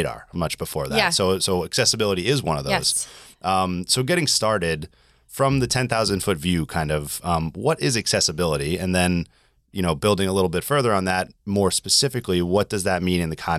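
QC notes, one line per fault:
No audible faults found in this speech recording.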